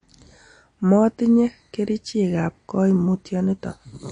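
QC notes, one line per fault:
Throughout, MP3 compression: nothing reaches above 9.8 kHz, and the damage is plainly audible, with a watery, swirling quality on the speech and smeared consonant onsets. This is likely an MP3 encoder short of bits, consistent with a low rate near 48 kbps, cutting the treble at a fixed point and zeroing weak frequency lines that flicker between frames. A simple low-pass filter would dull the top just as cleanly but leave no swirl.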